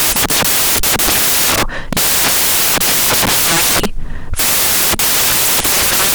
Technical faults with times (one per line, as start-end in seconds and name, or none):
0.00-6.14 samples built from the wrong bytes